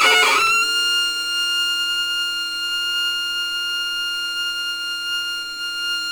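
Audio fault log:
throughout, crude rate conversion: a gritty, inharmonic fizz rides on the sound, growing on loud and bright passages and falling away in quiet ones. The error sits roughly 20 dB below the signal, which is high enough to hear. It points to a step down from 48 kHz to 44.1 kHz made by taking the nearest existing sample, with no filtering. Samples get skipped in a fixed repeating cycle, adding shifted, inharmonic copies of the source.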